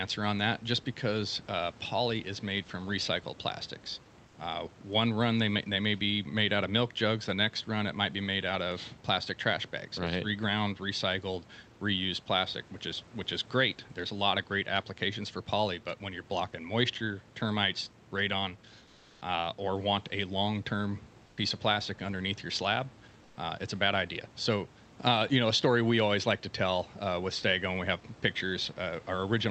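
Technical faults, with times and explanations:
18.85–19.21 s, 21.25–21.37 s and 23.23–23.35 s: comfort noise in place of the background. In these pauses, for 360 ms, then 120 ms twice, the room background, sitting about 29 to 32 dB below the loudest speech, gives way to a smoother synthetic hiss. The first keeps the same level; the two later ones drop by about 4 dB. The likely cause is Opus discontinuous transmission: the sender went quiet and the receiver generated noise. On a spectrogram, the textured background becomes an even, featureless band below the 8 kHz call-codec limit, and in the two later pauses the waveform's noise floor shifts step-wise at the edges.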